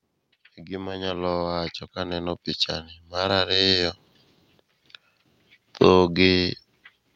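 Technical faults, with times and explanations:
0.66 to 2.49 s, automatic gain rising: the level control judged the input too quiet and stepped its gain up by about 8 dB over nearly two seconds, so speech and background noise swell together rather than the speech alone getting louder.
3.1 to 4.0 s, automatic gain rising: a second, shorter push of about 4 dB over under a second, again lifting the background floor along with the speech as the gain climbs.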